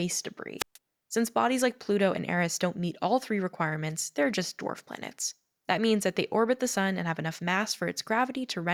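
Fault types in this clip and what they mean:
Wireless microphone squelch dropout: the FM radio link fades until the receiver's squelch mutes its output, cutting a roughly 133 ms silent hole into the speech between 0.58 and 0.78 s. The waveform flattens there, and a spectrogram shows a blank vertical band.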